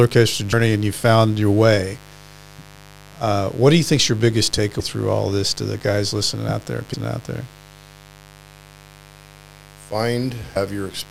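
A steady, raspy buzz runs beneath the whole of this speech recording, sitting about 25 dB below the voice. It is mains buzz on a 50 Hz supply. Sharp switching spikes from a dimmer, a rectifier or an unshielded lead enter twice per mains cycle, and the resulting ladder of 50 Hz harmonics climbs into the kilohertz range, which gives the buzz its edge rather than a pure hum. Four times the talk also jumps forward. The first jump is at 0.52 s, just before "and you found your", and skips about a tenth of a second. The second is at 4.79 s, between "you think's your biggest" and "through all this to", and loses about 0.2 s. The third is at 6.93 s, between "guys listening out there" and "out there", and loses about 0.4 s. The fourth is at 10.55 s and loses about 0.7 s. These are compressed frames skipped: whole blocks of coded audio were missing or rejected as damaged, and the gap sizes fit a 24 ms frame length.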